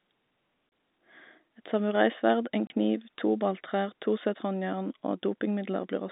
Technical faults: packet loss filled with silence

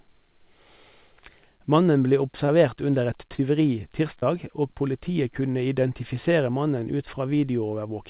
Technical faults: short concealed packet loss

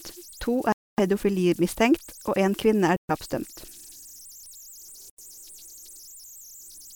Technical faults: converter idle tones; Bluetooth dropout

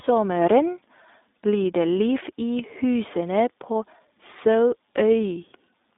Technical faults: iLBC codec

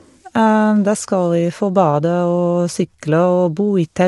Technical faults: low-delay AAC compression

